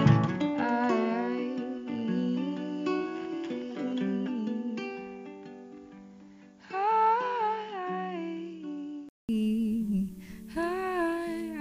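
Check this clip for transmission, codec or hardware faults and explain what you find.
One fault is present. From the start until 9.29 s the sound is band-limited, with nothing above 7.2 kHz. It sits about 5 dB lower and carries a faint noise floor of its own, roughly 50 dB down. A 200 ms silence then gives way to a fuller, brighter sound. The likely cause is an input switched to a poorer device, a different microphone or headset profile with a narrower passband. Unlike a codec bandwidth drop, level, tone and background noise all change together at one clean break.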